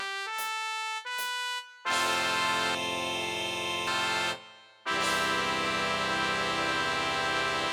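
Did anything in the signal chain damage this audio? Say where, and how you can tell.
Yes: from 2.75 to 3.87 s the audio turns hollow and phasey. This is channel delay (comb filtering): one channel lags about a third of a millisecond before the mono sum, notching near 1.5 kHz.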